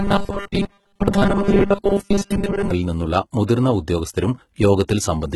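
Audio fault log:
throughout: HE-AAC compression, likely. The damage is heavy and nothing remains above 11.8 kHz, which fits a bitrate near 16 kbps. The treble is rebuilt from copied lower bands under a coarse envelope, so its harmonics do not match the original.
0.01 to 2.71 s: robotic sound from repeated short buffers, likely. A rigid buzz at 200 Hz is imposed on the speech. That rate fits a 5 ms buffer being replayed while new audio is late. Roughly seventy percent of the real sound is skipped.
4.88 s: pre-echo. A short hiss, spread over about 13 ms, comes just before a sharp attack. The codec's noise, sized for the loud attack, fills the whole block, including the quiet moment before it. The attack sounds smeared.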